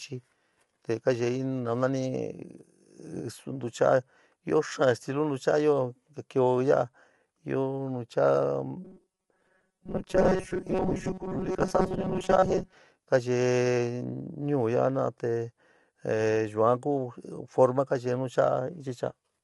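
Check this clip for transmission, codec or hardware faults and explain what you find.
Two faults are present: codec damage throughout, and a robotic stretch in the middle.

Low-delay AAC compression throughout: speech sounds rough and grainy, with nothing above 11.6 kHz. The likely cause is AAC-ELD's short frames blurring harmonics at a bitrate around 32 kbps. Unlike ordinary band-limiting, noise fills the gaps between harmonics.

Robotic sound from repeated short buffers, 8.85 to 12.74 s: a rigid metallic buzz at 188 Hz that still roughly tracks the speech. This is likely from repeating the last chunk of roughly 5.3 ms, with most of the real audio skipped. Unlike codec graininess, it imposes a steady fixed pitch.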